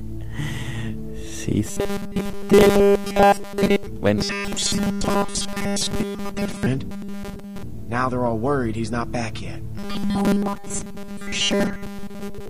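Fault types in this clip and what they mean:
Robotic sound from repeated short buffers: a rigid metallic 200 Hz buzz, likely from a 5 ms segment looped in place of new audio; the spectrogram shows evenly spaced harmonic lines.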